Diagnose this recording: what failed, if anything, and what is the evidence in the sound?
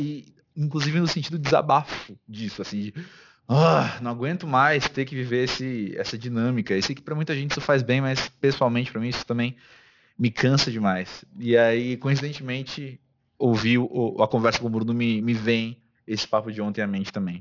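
Aliasing from a careless sample-rate conversion: sibilants sound gritty and metallic throughout, with energy jammed against 6 kHz, pointing to an unfiltered drop to 12 kHz folding highs back fairly strongly.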